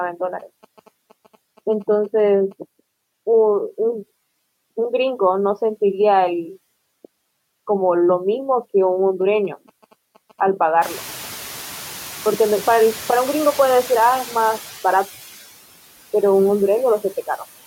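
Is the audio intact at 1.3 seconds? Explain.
No. A nearby 2G phone's signalling bursts, from 0.39 to 2.53 s, are rectified by the audio circuit, producing GSM signalling bursts: a galloping dit-dit-dit of short 217 Hz buzzes well below the speech. A noise suppressor acting frame by frame also lowers steady noise by about 14 dB, so the noise sinks between the words and rises under them.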